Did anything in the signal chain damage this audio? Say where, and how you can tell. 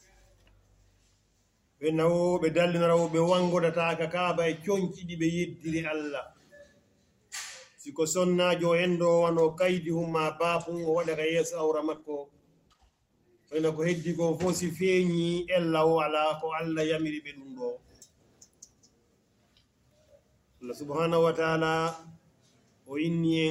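Yes, a call bitrate drop in the codec stage. From 9.27 s to 17.43 s the sound turns coarse and muffled, with the low point lasting about 5.9 s. The bandwidth estimate fell and the encoder lost its high frequencies. That points to a fall from about 128 kbps to around 16 kbps.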